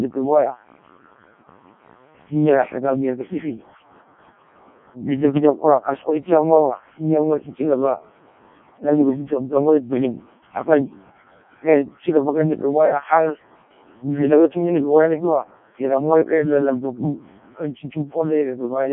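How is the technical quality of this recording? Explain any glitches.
Poor: the speech sounds robotic and buzzy throughout, with nothing above 3.8 kHz. This is Codec 2 vocoder damage, consistent with roughly 0.7 kbit/s, resynthesising voice from sine waves using only pitch, voicing, energy and spectral envelope, so the original waveform is lost.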